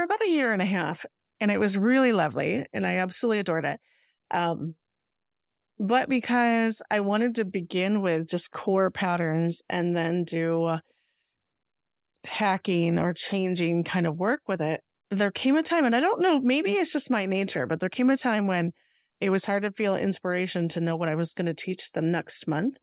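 No technical faults can be heard anywhere in the speech. It carries the narrow telephone band of a G.711 A-law call at 64 kbps, with nothing above 4 kHz.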